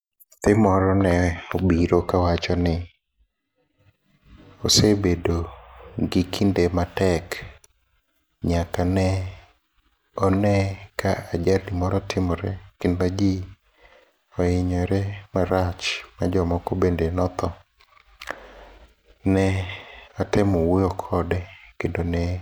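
From 1.63 to 3.79 s, de-emphasis is applied wrongly: a treble-cut filter meant to reverse pre-emphasis acts on audio that never had that boost, or is applied a second time, so it removes high end that belonged in the signal. The response tilts down gradually above the midrange, reaching about 8 dB lower at 10 kHz than at 1 kHz. Over that stretch the speech loses its crispness and sounds dull and muffled.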